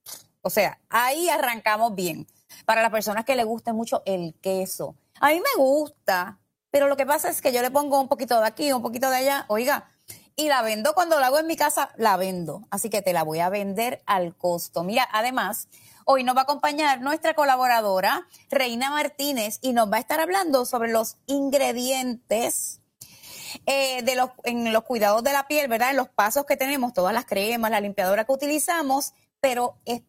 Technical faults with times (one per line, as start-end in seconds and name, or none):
18.25-18.51 sound cut by the noise suppressor
29.73-30.08 sound cut by the noise suppressor